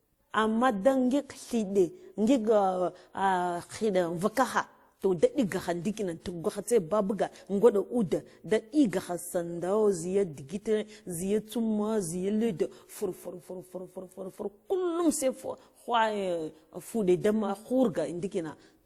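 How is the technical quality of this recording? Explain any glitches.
The recording has one fault, and it runs the whole way through. The speech carries two layers of compression damage at once.

Transcoding between lossy codecs is the likely cause. The grain points to WMA at about 64 kbit/s, then Opus at about 48 kbit/s. Opus spent bits re-encoding WMA's artefacts and added its own. Both textures sit together on the speech. Nothing reaches above 20 kHz.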